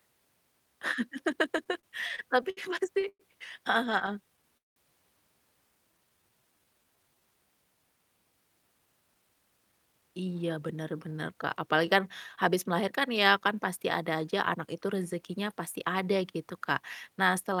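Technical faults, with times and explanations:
1.57–2.59 s, repeated stalls (stutter): ten gaps, the longest 68 ms, were filled with about 194 ms of continued sound, about 19% of the span. Packets arrived late again and again, so the jitter buffer kept running dry. Nothing is lost, but the audio drags and stutters before "pasti heeh".
3.01 s, short stall from a late packet: one packet missed its slot and the jitter buffer emptied. The receiver stretched the preceding sound by 15 ms until it arrived, then resumed from the same point, adding 15 ms of delay with nothing missing.
3.08–3.21 s, call audio freeze: the sound is carried on for 111 ms, fading to about 60 ms of silence, then resumes where it stopped. This is likely packets held up in transit draining the jitter buffer. It inserts a gap and 111 ms of delay, with nothing missing.
3.85–4.78 s, repeated stalls (stutter): after "pasti heeh", seven gaps, the longest 188 ms, were bridged with 240 ms of continued sound, about 26% of the span. 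Late packets repeatedly emptied the jitter buffer, so the audio halts and restarts without losing content.
5.91–7.21 s, jitter buffer slow-down: to rebuild its reserve, the receiver repeated pitch periods or pause fragments, adding 221 ms. The speech runs at 84% speed at unchanged pitch, so sounds are drawn out.
8.79–14.89 s, jitter buffer speed-up: the jitter buffer held more than its target, so the receiver trimmed short pitch-period pieces, removing about half a second before "rezekinya pasti ada gitu". The speech runs at 108% speed at the same pitch and sounds hurried.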